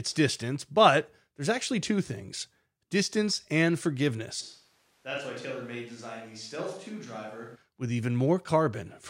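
From 4.42 to 7.55 s there's a switch to a distant microphone, likely because the close mic dropped out. The speech suddenly turns roomy and thin, about 10 dB quieter, with room noise up.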